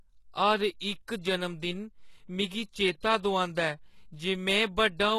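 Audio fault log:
Throughout: HE-AAC compression. The treble of this speech sounds bright but synthetic, with sibilants turning gritty and metallic and lispy, and nothing at all above 12.3 kHz. The likely cause is a codec that encodes only the lower band and rebuilds the top by copying lower bands upward under a coarse envelope, so the upper harmonics misalign, which fits a bitrate around 16 kbps. A spectrogram shows a hard ceiling at 12.3 kHz and repeated, blocky high-band texture.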